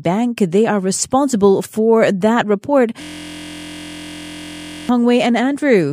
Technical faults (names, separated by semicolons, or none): system hang loop